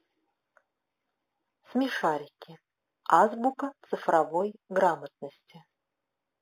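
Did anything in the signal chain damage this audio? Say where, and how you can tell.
Yes. The damage happened at a sample-rate conversion stage, and it runs through the whole clip. It is imaging from linear upsampling. The top of the speech band sounds dull. A faint metallic shimmer sits on sibilants. The first image is mirrored into 4 to 8 kHz, around 30 dB down. That fits an 8 kHz source raised to 48 kHz by straight-line interpolation, which filters too weakly to remove the images.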